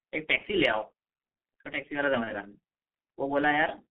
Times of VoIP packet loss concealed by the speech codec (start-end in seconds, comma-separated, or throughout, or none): 0.38-0.42